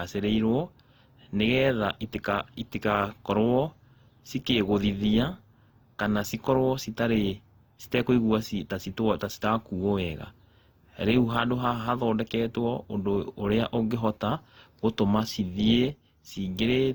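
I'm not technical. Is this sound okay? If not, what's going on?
No. From start to finish the speech has a swirly, watery quality, sounds hollow, and the starts of sounds are blurred rather than crisp. This is generation loss: the recording was most likely squeezed with a lossy compression format, unpacked, and squeezed again, roughly three times over. Each round throws away a little more detail in slightly different places, so the damage piles up and the speech sounds worse than a single compression would leave it.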